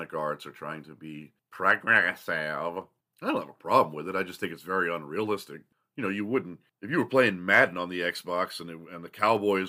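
From 0.19 s to 9.37 s, a click recurs every 1.31 s, about seven in all, showing as evenly spaced thin vertical lines on a spectrogram and waveform steps. These are likely clock drift buffer slips, with mismatched clocks, roughly 300 ppm apart, dropping or repeating around fifteen samples each time.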